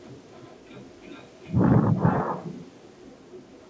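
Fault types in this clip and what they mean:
Echo with no canceller: the far end plays the call through a loudspeaker, its microphone catches it, and nothing strips it out, so the speech returns after the network round trip. Here every phrase is trailed, roughly 0.4 s later, by a copy about 9 dB quieter and thinner. Unlike room reverberation, which smears directly into the sound, this is a distinct, delayed repeat. The band-limited call path, with nothing above 8 kHz, points to G.722.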